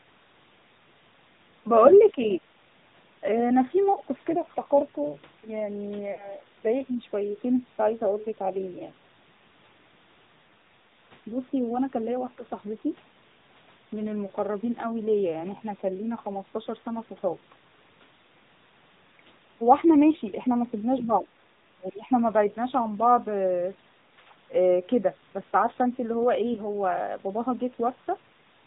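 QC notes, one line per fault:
Throughout: AMR narrowband mobile codec. The speech is band-limited, with nothing above 4 kHz. At 10.2 kbps the few excitation pulses per subframe cannot rebuild fine detail. The voice sounds plainly buzzy and synthetic, with a thin, boxy telephone tone.
3.94–3.98 s, 6.12–6.28 s, 26.54–26.61 s: lost AMR speech frames. The decoder repeats its last pitch and vocal-tract settings at falling gain. The first and last gaps give brief dips that fit one missing 20 ms frame. The middle one stretches and fades, which fits about 60 ms lost.
10.48–10.53 s, 20.98–21.13 s, 22.11–22.22 s: other side's voice leaking through. Brief scraps of a second voice sit under the speech, likely loudspeaker echo the canceller missed. It is very faint at 10.5 s and under 22.1 s, and clearly audible at 21.0 s.
21.05–21.25 s, 21.75–22.05 s: speech suppressed in double talk. The talker's level dips by about 5 dB, then by about 20 dB for roughly 300 ms. 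This likely happens because the canceller clamped down while both sides overlapped around the leaked echo.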